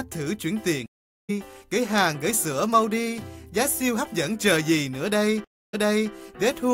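Two stream reconnects break the audio. At 0.86 s it goes silent for 427 ms and resumes about half a second later, skipping material. At 5.44 s a 288 ms gap ends with a fresh decoder restarting 395 ms earlier, repeating audio.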